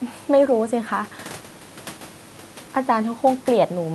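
No technical faults are audible.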